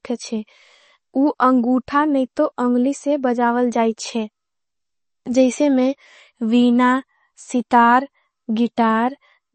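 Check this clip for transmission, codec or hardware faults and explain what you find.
One fault runs through the whole clip: the speech shows plainly audible MP3 compression damage from start to finish. The damage level fits a low bitrate around 32 kbps. The likely cause is an encoder short of bits: it zeroes weaker frequency lines, which flicker on and off between frames. That makes the voice sound watery and swirling, with chirpy sibilants and softened consonant attacks. A plain low-pass filter would dull the treble just as cleanly but leave no swirl.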